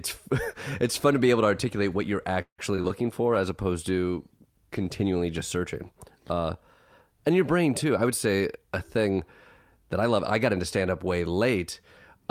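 Right after "to articulate what you're", from about 2.41 to 2.92 s, there's a burst of repeated packet loss that gives the speech that robotic, choppy edge. Four holes land in half a second, the longest around 170 ms. The receiver papers over each one by stretching the last bit of sound, so nearly half that stretch is synthetic fill, and some audio is simply gone. That's where the missing chunks come from.

Then from about 3.35 to 7.34 s there's a call bitrate drop. The bandwidth estimate fell and the encoder went from 64 kbps down to 25 kbps, bottoming out for roughly 1.4 s. At that rate Opus codes much more coarsely and trims the top end, so the speech gets rough, a bit watery and dull. It comes back just before "your brain".

Right after "your brain" there are two jitter buffer speed-ups, one from about 7.90 to 9.19 s and one from 9.78 to 10.81 s. The buffer was holding more audio than it wanted, so the receiver kept cutting out tiny pitch-period slices to catch up. 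The first runs at about 107% speed and drops something like a tenth of a second. The second runs at 105% and drops a bit less. Pitch stays put, but the delivery sounds noticeably hurried.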